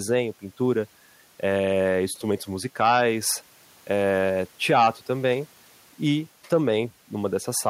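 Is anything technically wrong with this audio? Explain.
No, nothing technically wrong can be heard anywhere in this speech recording; the signal stays intact and steady throughout.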